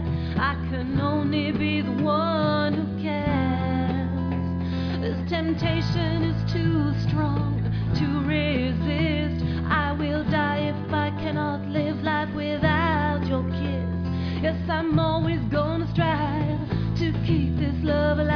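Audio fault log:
No technical faults can be heard anywhere in the signal.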